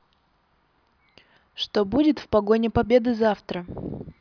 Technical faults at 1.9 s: none

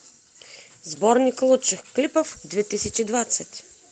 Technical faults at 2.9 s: lost packet rebuilt from error correction

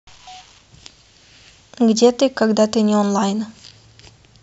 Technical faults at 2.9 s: none

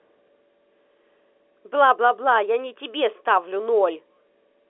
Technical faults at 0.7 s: none

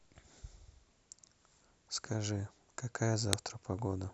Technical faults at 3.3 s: file header played as audio

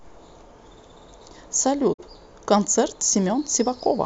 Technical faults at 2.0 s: digital broadcast dropout

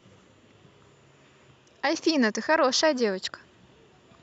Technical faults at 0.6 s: none

